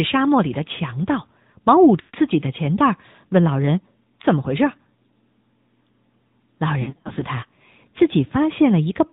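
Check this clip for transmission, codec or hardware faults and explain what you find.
Two faults are present: narrowband mobile coding across the whole clip, and lost speech frames at two points.

The AMR narrowband mobile codec colours the entire clip. The speech is squeezed into an 8 kHz sampled band, so nothing above 4 kHz survives. The voice is rebuilt from a vocal tract model excited by a few pulses per subframe. At this rate the damage is plainly audible: dull, boxy and buzzy. The degree of roughness fits a mid-range mode of about 10 kbps.

Lost AMR speech frames occur at 2.00 to 2.16 s and at 6.82 to 7.24 s. When a frame fails, the decoder repeats the last good pitch and vocal tract settings and lowers the gain. In the first event, about 140 ms of speech drops out in one run. The sound smears, fades toward silence, then returns weak. In the second event, about 200 ms is lost, scattered across 400 ms. 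The longest run is only 60 ms, so this one sounds like repeated dips and warbles rather than a single fade.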